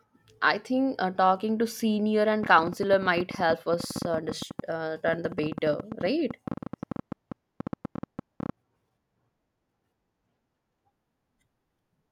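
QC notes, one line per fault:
2.43–8.50 s, train of clicks: roughly seventy short, similar pops tick over the speech and its pauses at about 11.9 per second, spaced unevenly, each peaking a few decibels above the speech level. The likely source is interference from nearby equipment or a faulty connection or power supply injecting repeated pulses. On a spectrogram they show as thin vertical broadband lines at irregular intervals; on the waveform, narrow spikes standing clear of the speech envelope and visible in the gaps too.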